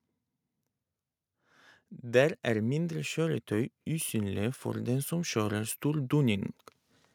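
Automatic gain rising runs through this speech clip from 2.01 s to 6.52 s. The level climbs by about 8 dB over those four and a half seconds. The gain control judged the incoming signal too quiet and kept turning itself up. Because it scales everything it receives, the background noise swells along with the speech. The slow, steady ramp is the sign that an automatic level loop is acting, rather than the talker getting louder.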